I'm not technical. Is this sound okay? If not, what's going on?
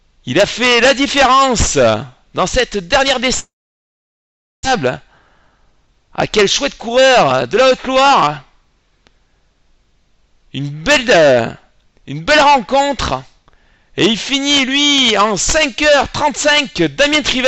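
No. From 3.39 to 4.67 s the sound cuts out. The last bit trails off briefly, then there is about 1.1 s of silence. When it returns, about a second is gone for good. The likely cause is a long network dropout.

Right after, there is a jitter buffer speed-up. From 4.77 to 5.88 s the sound runs about 8% fast, and from 6.72 to 8.70 s about 6% fast. Pitch stays the same. Tiny slices are trimmed out to catch up, roughly a tenth of a second and then a bit more.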